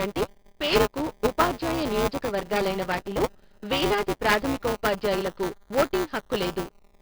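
From start to finish, the speech carries 4-bit ADPCM compression, and the damage is heavy. Each sample is coded as a coarse step from a guess, so the error rises and falls with the level. Loud syllables get a gritty hiss. Sharp onsets distort. A bitrate around 44 kbps fits a low sample rate near 11 kHz.

Buffer tearing runs through the whole clip too. The writer and reader of the playback buffer have drifted, so they cross every period. A small slice of each buffer replays audio about 10 ms old, with hard joins. This gives a steady robotic buzz at 200 Hz, heard only while sound is present.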